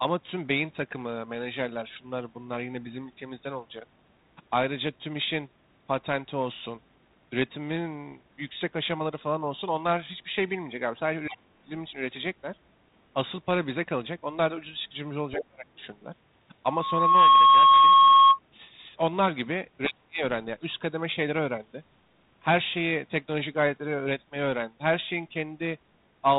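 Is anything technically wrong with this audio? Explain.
Yes, there are three kinds of fault in this speech.

Other side's voice leaking through: at 11.29 to 11.37 s and 15.38 to 15.44 s, a brief second voice appears, about 20 dB and then about 10 dB below the talker. The likely cause is an echo canceller that left loudspeaker pickup in the microphone. On a spectrogram these show as short, foreign harmonic scraps.

Speech suppressed in double talk: at 11.29 to 11.72 s, 15.36 to 15.66 s and 19.86 to 20.22 s, the talker's level falls roughly 25 to 30 dB for around 300 ms each time. The likely cause is an echo canceller ducking everything while both sides spoke. The waveform shows sudden envelope notches.

Loudspeaker feedback squeal: from 16.65 to 18.39 s, a 1.1 kHz tone swells over about half a second to roughly 15 dB above the speech. The microphone-loudspeaker loop gain exceeded one at that frequency. 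On a spectrogram it is a single bright horizontal line.

Throughout, the 32 kbit/s G.726 telephone coding is present, with only light codec damage and nothing above 4 kHz.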